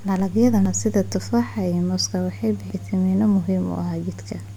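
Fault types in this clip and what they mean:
Damaged data in a compressed stream: at 0.66–0.69 s and 2.70–2.74 s the speech breaks into brief glitches, each about 30 ms long, where corrupted bytes leave the decoder misreading frames and losing sync until it locks onto the next valid frame header.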